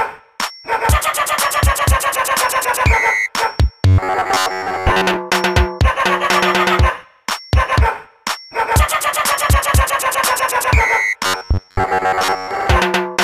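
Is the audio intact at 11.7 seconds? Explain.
No. Between 11.26 and 12.51 s the playback likely ran short of new audio and kept looping a tiny stretch of roughly 11 ms, skipping most of the real material. This is the robotic sound from repeated short buffers: those repeats stamp a fixed buzz at about 94 Hz onto the sound, so for that span it comes out as a stiff, metallic drone that only loosely tracks the original audio.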